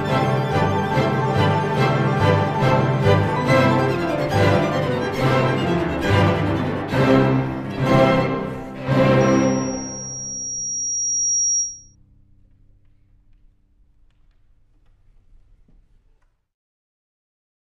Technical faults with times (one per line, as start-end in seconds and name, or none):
9.20-11.95 loudspeaker feedback squeal